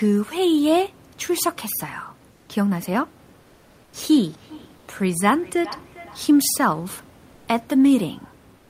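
The sender's voice detector likely halted transmission in pauses, as Opus-style discontinuous transmission does, and the receiver filled the gaps with comfort noise in place of the background at 2.31–2.49 s and 3.41–3.93 s. The real room background becomes a flat, featureless hiss, about 3 to 6 dB quieter.

From 4.11 to 6.66 s, a second device in the room replays the call and the first device's microphone picks that sound up again, producing feedback echo between two devices. Each phrase returns roughly every 0.4 s, about 20 dB below the speech, thinner and more ringing with each pass.

Comfort noise in place of the background recurs at 4.77–4.87 s, inside the echo, and again at 7.35–7.47 s and 8.57–8.70 s. Each time, the room background drops out for a smooth synthetic wash about 2 to 4 dB quieter.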